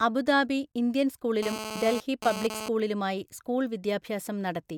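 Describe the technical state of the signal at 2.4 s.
GSM phone buzz spans 1.43 to 2.69 s: the audio circuit rectifies a nearby 2G phone's 217 Hz bursts into a raspy buzz about 8 dB below the speech.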